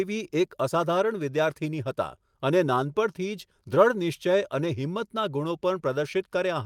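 No technical faults can be heard in this recording.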